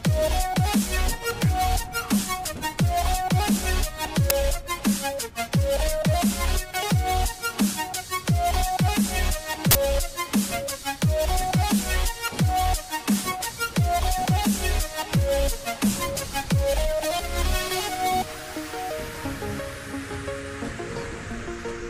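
At 4.3 s there's a sharp crack, then a longer burst of digital noise from 9.71 to 9.75 s. That's an uninitialised buffer: blocks of about 10 ms and 40 ms went out before any audio was written, so leftover memory played as sound.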